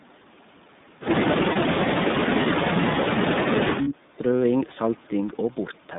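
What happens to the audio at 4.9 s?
At 4.9 s, as throughout, the speech carries iLBC codec damage: band-limited to about 150 Hz–3.7 kHz, independently coded 30 ms frames give a plainly rough, synthetic texture.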